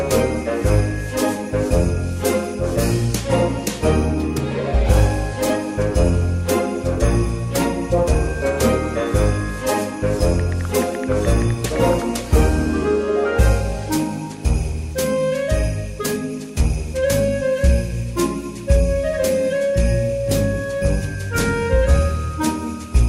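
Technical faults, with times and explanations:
There are no technical faults, so there are no times or explanations to give.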